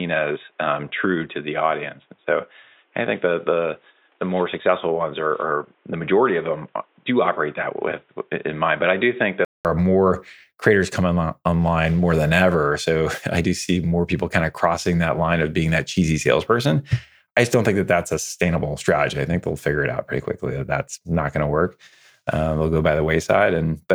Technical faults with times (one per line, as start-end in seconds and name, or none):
0.00-9.65 input switched to a poorer device